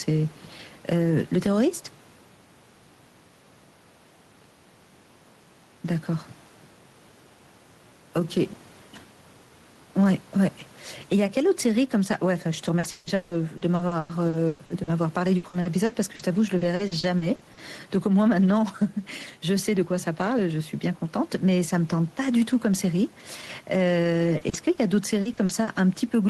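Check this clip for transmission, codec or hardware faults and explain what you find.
Two faults are present. Gain pumping runs throughout, with the gain swinging by around 10 dB. This is likely from an overly high input gain with a fast limiter. Steady room noise sits about 35 dB below the speech and is not a fault.

Repeated packet loss (robotic sound) occurs from 12.79 to 17.59 s, where about 28% is concealed with gaps up to 160 ms, and from 24.37 to 25.69 s, with gaps up to 40 ms. Each missing piece is filled by extending the previous sound, which gives a choppy texture with pieces missing rather than clean dropouts.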